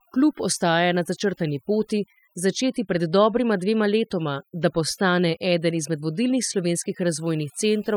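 Overdone noise removal runs through the whole clip: a noise reduction stage was set far too aggressively, so any frequency band sitting close to its noise estimate gets pushed right down or switched off, and the softer parts of the speech fall below that line along with the noise. The result is a background that drops away, dotted with twinkling specks.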